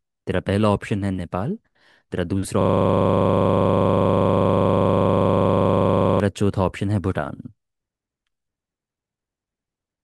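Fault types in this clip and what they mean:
System hang loop: From 2.62 to 6.2 s the speech stops moving forward and a single 40 ms slice repeats exactly, about 90 times, producing a rapid machine-gun stutter at 25 Hz. The cause is a freeze in the computer or its driver. Nothing new reached the sound hardware, so it kept replaying the same short ring buffer over and over until the system recovered.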